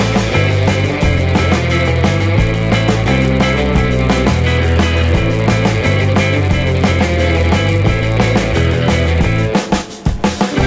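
Throughout the audio, a resampler restarted on every block leaves a steady buzz at 100 Hz. The blocks are 10 ms long, and the conversion, which points to 48 kHz down to 16 kHz, treats each one in isolation. Each block edge therefore lacks its true neighbouring samples and carries a small error. Unlike mains hum, this buzz vanishes whenever the sound stops and grows with the signal.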